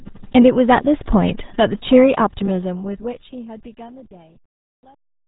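From start to finish the speech passes through the RealAudio 14.4 codec, an 8 kbit/s dial-up speech coder. It discards everything above 3.8 kHz and rebuilds the rest coarsely, leaving a muffled, gargly voice. A plain low-pass filter would dull it without that bubbling, smeared texture.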